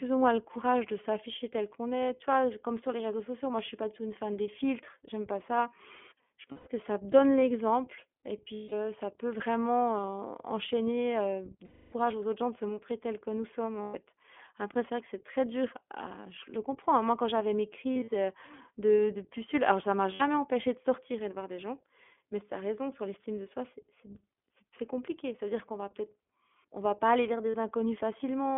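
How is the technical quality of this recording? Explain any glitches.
The quality is limited: the speech has gone through a narrowband iLBC codec and has seven dropouts where iLBC frames were lost.

The iLBC codec is present throughout. Each short frame is coded on its own, and the band is held to about 250 Hz to 3.4 kHz. The speech sounds plainly rough and synthetic, consistent with the 15.2 kbps mode. On a spectrogram there is an empty region above 3.4 kHz and a thin low end.

Lost iLBC frames occur at 6.52–6.68 s (140 ms), 8.54–8.73 s (180 ms), 11.66–11.94 s (260 ms), 13.82–13.96 s (120 ms), 17.93–18.09 s (scattered, longest run about 40 ms), 20.14–20.22 s (60 ms) and 27.50–27.55 s (40 ms). The decoder repeats the last pitch cycle mixed with noise, so each gap is heard as a held, buzzy vowel, and the speech recovers at once. On a spectrogram each gap shows as flat repeated harmonic bands. 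In the waveform it is an evenly repeating stretch, fading in the longer gaps.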